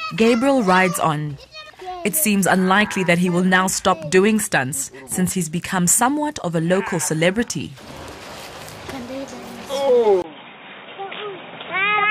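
At 2.81 to 2.83 s a single loud pop sits on top of the audio, peaking around 5 dB above the surrounding signal. The sound carries on underneath it uninterrupted. It is a brief voltage pulse added to the signal path, likely from a plug, switch, static discharge or driver glitch, which the downstream circuitry turns into a short, sharp transient. At 10.22 s the input appears to switch to a poorer device. After a gap of about 20 ms the sound comes back dull and boxy, with nothing above 3.8 kHz, a level drop of about 5 dB and a new background noise floor roughly 30 dB below the signal. It stays that way to the end of the clip. The narrow band, changed tone and fresh noise point to a different capture chain, likely a fallback microphone or a headset's call profile taking over.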